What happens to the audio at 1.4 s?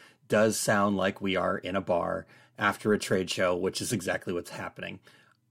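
Nothing goes wrong at 1.4 s; the speech runs through that moment intact, with no dropout, click or distortion.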